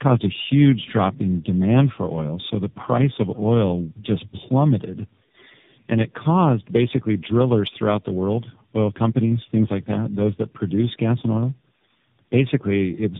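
Speech, with tandem speech coding throughout. Nothing reaches above 3.7 kHz. The sound is rough, muffled and warbly. That points to three low-rate speech coders in a row, such as iLBC and AMR-NB, each re-coding the last one's degraded output.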